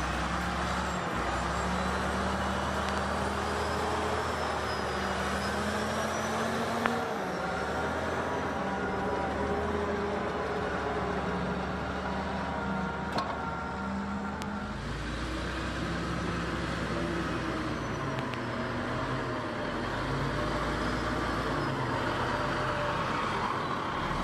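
Loud pops break through the sound at 2.89–3.00 s (a double), 6.86–6.88 s, 14.42–14.44 s and 18.19–18.36 s (another double), peaking roughly 20 to 25 dB above the sound. They are likely voltage spikes from a switch or static, and show as sharp waveform spikes and thin broadband vertical spectrogram lines.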